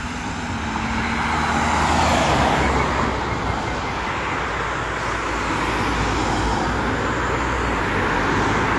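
Lossy coding at a low data rate, most likely AAC compression of the AAC-LC kind, runs through the whole of this everyday-sound recording. The encoder has too few bits for its frequency lines, so it discards the top of the spectrum and coarsens what remains. Nothing survives above 11.5 kHz, which fits a rate near 32 kbps. The sound comes out plainly dull and smeared, with a warbling, fizzy texture where the encoder has starved the bands.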